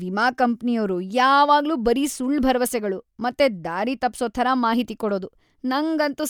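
No technical faults can be heard anywhere in the speech recording, and the signal stays continuous and stable throughout.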